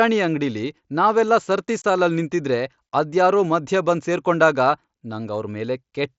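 A speech recording over a wideband mSBC Bluetooth headset link, where unconcealed Bluetooth headset packet loss occurs at 1.82 s. A short run of voice packets between headset and phone never arrived, which fits three lost frames, and nothing was generated to cover them, so the gap was filled with silence or an idle pattern. The result is a hole of about 26 ms cut out of the speech, with hard edges that can click on entry and exit.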